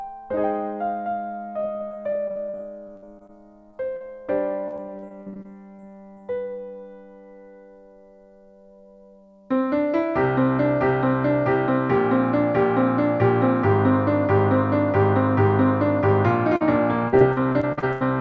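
From 1.60 to 3.31 s the sound turns choppy and robotic. This is repeated packet loss: twelve gaps of up to 60 ms, each patched by extending the previous sound. Brief smears follow at 3.71–3.75 s and 3.97–4.02 s, where short concealed packet loss filled 20 ms and 40 ms holes with continued audio before blending back. The robotic chop returns from 4.68 to 6.18 s across ten gaps of up to 43 ms. Another smear at 16.56–16.62 s bridges a 40 ms loss. The densest burst runs from 17.08 to 18.03 s, with eight gaps of up to 84 ms, about a third of that stretch concealed. Throughout, the G.722 call path leaves nothing above 8 kHz.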